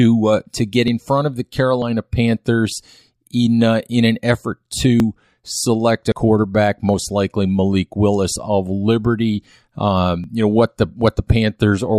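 The recording side likely fell behind and let the hardware overwrite samples it hadn't yet collected, a dropped buffer (overrun). Each time, roughly 20 ms of speech vanishes and the edges are butted together, giving a small forward jump at 0.88 s, 1.82 s after "in front of the", 5.0 s after "uh in an effort", 8.36 s, and 10.24 s just before "you know what". At 6.12 s about 70 ms goes.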